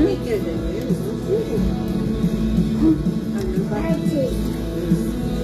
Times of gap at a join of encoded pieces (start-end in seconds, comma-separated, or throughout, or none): none